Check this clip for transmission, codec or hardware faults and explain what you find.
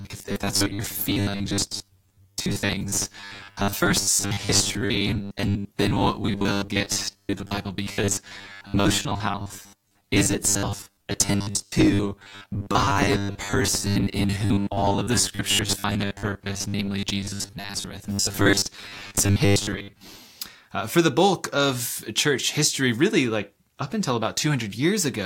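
One fault is present. From 0.01 to 20.2 s there is robotic sound from repeated short buffers. The speech becomes a rigid 100 Hz metallic buzz, likely because about half the time is refilled by looping a 10 ms buffer.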